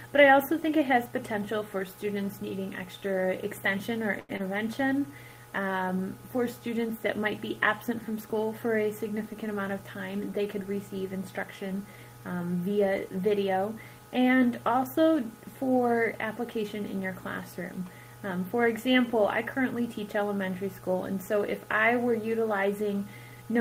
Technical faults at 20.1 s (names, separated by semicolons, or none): none